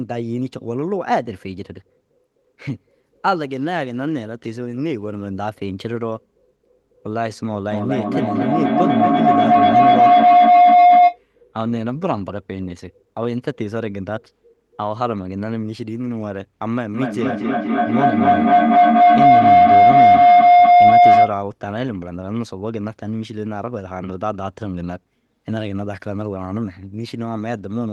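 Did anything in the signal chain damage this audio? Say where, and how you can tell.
Yes: feedback howl from an acoustic loop between call devices, 7.71–11.22 s and 16.94–21.39 s. A tone near 700 Hz, pulsing about five times a second, grows instead of fading like echo.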